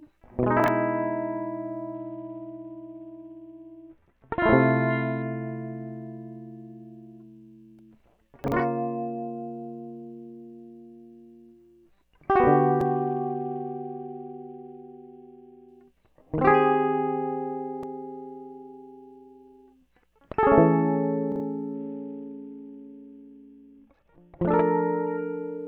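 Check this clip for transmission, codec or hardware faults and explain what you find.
Two faults recur through the music: chunks out of order and a Bluetooth SBC bit pool drop.

Chunks out of order occur at 0.60 to 0.68 s, 8.44 to 8.52 s and 21.32 to 21.40 s. In each, a 40 ms chunk plays one chunk late, so the music stutters in a jumbled order. Because nothing goes missing, this is a reordering rather than a dropout.

A Bluetooth SBC bit pool drop occurs at 1.94 to 5.22 s, 12.85 to 15.69 s and 21.74 to 24.54 s. The treble dulls and a gritty noise rises, which fits the link cutting the bit pool from 28 to about 7, near 66 kbps. The grit and the full recovery afterwards distinguish it from a plain low-pass filter.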